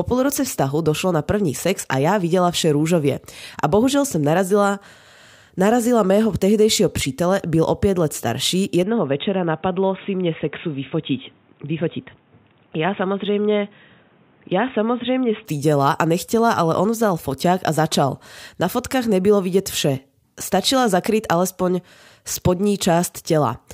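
At 8.83 s the speech abruptly turns dull and boxy, with nothing above about 3.8 kHz, and a faint new background noise appears well below the speech. There is no gap at the transition and the level stays roughly the same. At 15.46 s the full bandwidth returns just as suddenly. This is most likely an input switched to a poorer device, with the recording briefly taken from a narrower-band microphone or headset path before returning to the original input.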